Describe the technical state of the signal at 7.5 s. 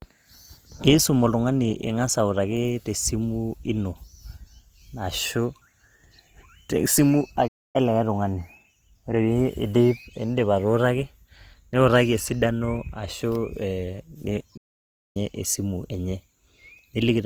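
At 7.5 s the speech drops out completely, going silent from 7.47 s until it resumes at 7.76 s. This is a playback stall, likely the player running short of data or its thread being blocked, so output halted until it recovered.

Through that moment the speech also sounds grainy and rough, with a noisy texture over the tones despite full bandwidth. That points to Opus compression in its music (CELT) mode, likely at a low rate around 24 kbps, filling starved bands with noise instead of leaving holes.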